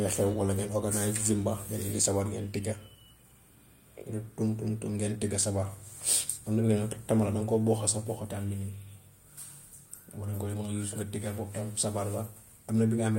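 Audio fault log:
No faults detected in this speech recording.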